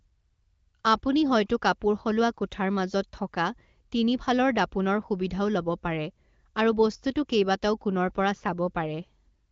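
No technical faults can be heard anywhere in the speech. It comes through the AMR wideband (HD Voice) codec with nothing above about 7.5 kHz and only light coding colour, which fits one of the codec's higher rates, near 16 kbit/s.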